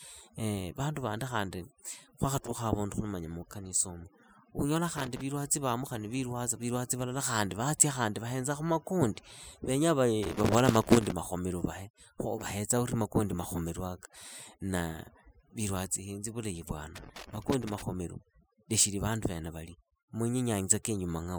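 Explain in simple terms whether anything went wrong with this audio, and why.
Two things went wrong. The first is overdone noise removal, heard all the way through. A cleanup tool was pushed too hard. Between phrases the background drops to near silence with twinkling specks. The quieter parts of the speech were removed too.

The second is loose connector crackle, heard three times: from 4.97 to 5.21 s, from 10.23 to 11.12 s, and from 16.95 to 17.82 s. A worn or dirty contact kept cutting in and out. That chops the signal and makes short bursts of scratchy crackle.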